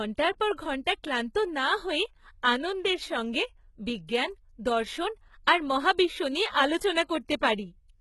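HE-AAC compression runs throughout the speech, from start to finish. The upper spectrum is not carried directly but synthesized by copying lower bands upward under a coarse envelope, so the treble reaches higher than plain AAC would at this bitrate while its harmonics fail to line up with those below the crossover. Sibilants come out gritty and metallic, with heavy damage and nothing above 11.8 kHz. The damage fits a very low bitrate, around 16 kbps, and points to this codec as the likely cause.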